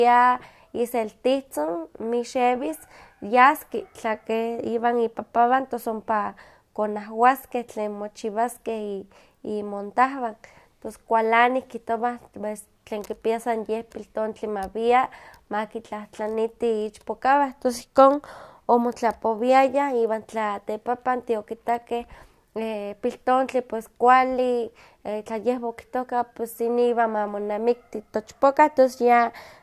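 No faults detected anywhere in the speech recording.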